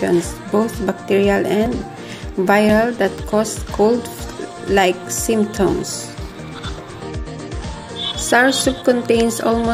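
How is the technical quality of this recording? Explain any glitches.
The recording has four abrupt skips, at 1.66, 2.69, 4.38 and 6.32 s, each heard as a jump in the sound. These are likely dropped buffers (overruns): samples weren't collected before being overwritten, so about 10 ms vanishes at 1.66 and 4.38 s and about 40 ms at 2.69 and 6.32 s, with the remaining audio spliced straight together. The waveform shows a sudden discontinuity with no gap, and the spectrogram shows a thin vertical broadband line at each splice.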